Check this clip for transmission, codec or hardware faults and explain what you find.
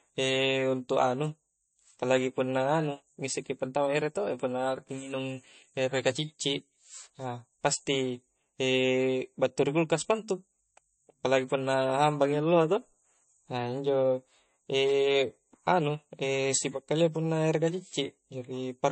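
There's one fault, running the whole way through: the speech sounds squashed, most likely by MP3 compression at a low bitrate, somewhere around 33 kbps. Nothing survives above about 8.3 kHz, because a starved encoder simply chops off the treble at a fixed point. It also drops quieter frequency detail and lets it flicker in and out between frames, so the speech takes on a clearly audible watery, swirly texture and its s sounds turn metallic.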